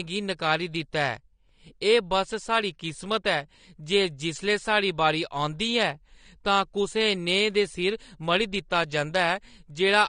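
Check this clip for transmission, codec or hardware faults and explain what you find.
One codec fault runs through the whole clip. AAC compression, throughout: the speech is dull, with nothing above 9.7 kHz and a fizzy, warbling texture on sibilants and held sounds. This likely comes from AAC-LC at a low bitrate, fitting roughly 32 kbps, where coarse quantisation drops the high band and smears detail.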